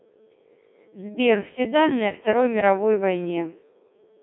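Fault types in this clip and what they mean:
Codec 2 vocoder: The speech is rebuilt from a handful of parameters (pitch, voicing, energy and a coarse spectral envelope) and resynthesised as sine waves, so it sounds robotic and buzzy, with heavy damage that fits a 1.6 kbit/s mode. A spectrogram shows rigid, evenly spaced harmonics confined to roughly 150 Hz to 3.6 kHz and a hard empty band above 3.7 kHz. The waveform no longer matches a natural voice in shape.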